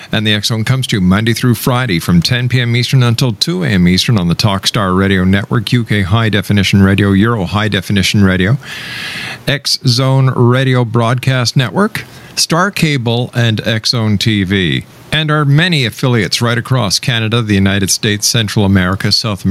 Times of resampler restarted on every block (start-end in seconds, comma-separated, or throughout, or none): none